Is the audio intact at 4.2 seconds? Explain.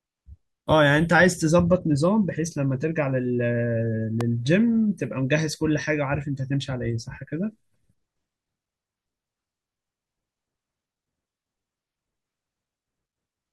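No. At 4.21 to 4.23 s a single sharp loud pop cuts in, peaking about 10 dB above the speech, which carries on underneath. It is likely a sudden voltage step or pulse from a plug, switch, static discharge or driver glitch added onto the signal.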